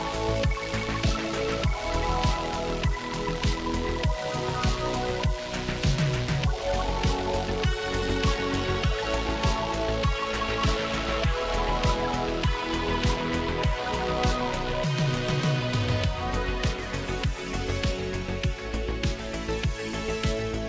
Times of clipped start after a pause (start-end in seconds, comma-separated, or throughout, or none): none